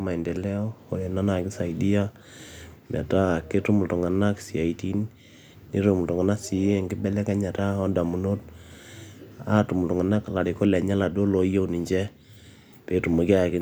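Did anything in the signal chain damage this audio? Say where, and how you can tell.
No, nothing in the signal chain damaged this recording.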